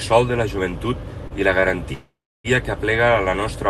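Around 1.27 to 1.33 s, right before "i la", there's a short stall from a late packet. The jitter buffer ran dry and the receiver held the last sound for about 31 ms. Again from 1.60 to 1.66 s, after "i la", a sound hangs for about 21 ms with a slight buzz or dip. Nothing's lost either time, just stretched.

Then from 1.93 to 2.47 s there's a call audio freeze, likely packets held up in transit. The last sound carries on as a fading buzz or hiss, then roughly 0.3 s of silence, before the speech resumes at "que aplega" with nothing missing.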